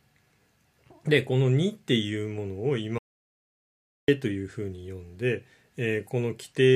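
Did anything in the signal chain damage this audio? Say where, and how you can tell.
Yes: an audio dropout to silence, 2.98 to 4.08 s, dead silence without room tone, likely a lost input link while recording continued.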